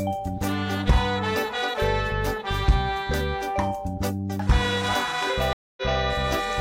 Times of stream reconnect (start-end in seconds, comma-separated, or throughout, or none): 5.53-6.00